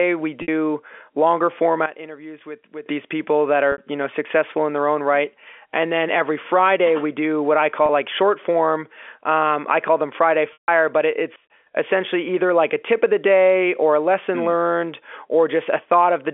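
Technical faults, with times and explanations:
0.42 s, 3.72 s (after "these people that"), 7.86 s (after "we do what I"), 10.53 s: packet loss with pitch repetition. Gaps of 60, 60, 30 and 150 ms are each bridged by repeating the last pitch period. The short ones sound like a brief buzzy hold rather than a silent dropout. The 150 ms gap fades out before the sound resumes.
1.86 to 2.86 s, and 11.36 to 11.5 s (after "but it"): sudden gain jump. Sound and background noise drop together, by about 13 dB and then about 18 dB, and restore abruptly rather than fading. This is likely an unramped digital gain change, which sets it apart from a level-riding compressor.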